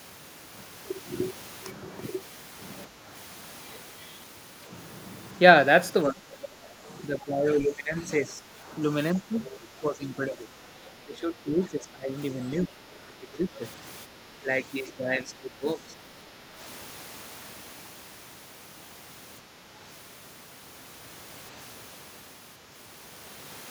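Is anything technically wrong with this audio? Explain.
Yes, there are echo-canceller problems. Speech suppressed in double talk shows up at 2.88–3.07 s, 6.06–13.61 s, 14.06–14.49 s and 14.87–16.61 s. The speech dips, by roughly 5 dB in the short spots, about 10 dB in the last stretch and up to about 15 dB across the long middle section. The likely cause is the canceller turning everything down while both sides talked at once. The other side's voice leaking through appears briefly at 9.45–9.56 s as a faint scrap about 20 dB below the speech, likely loudspeaker echo the canceller didn't fully remove.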